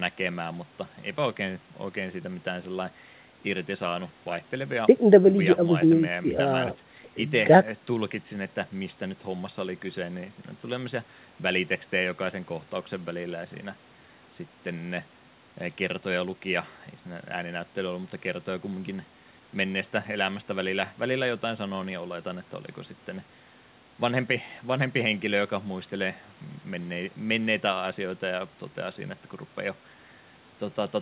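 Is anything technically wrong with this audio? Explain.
No, nothing stood out as a technical problem when listening to this speech recording.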